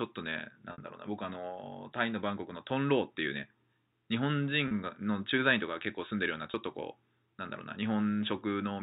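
Packet loss with pitch repetition hits at 0.72 s (a 60 ms gap, pointing to two lost packets), then at 4.68 s and 6.51 s (30 ms each). The receiver loops the last pitch period across each hole, so the speech briefly holds on a buzzy, frozen tone before resuming, fading into silence in the longer 60 ms gap, over a G.711 telephone band that stops at 4 kHz.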